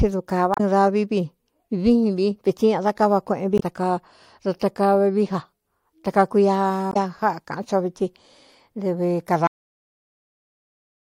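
Brief glitches break into the speech at 0.54 to 0.60 s, 3.57 to 3.62 s and 6.90 to 6.97 s. This is damaged data in a compressed stream: corrupted bytes made the decoder lose sync and hunt for the next frame. At 9.47 s the speech stops mid-sound, dropping straight to digital silence with no decay. This is a cut-off end, where the final buffers were never written or played.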